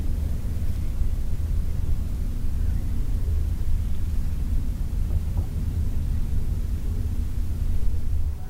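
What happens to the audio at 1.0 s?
Nothing goes wrong at 1.0 s; the audio plays through that moment intact, with no dropout, click or other fault.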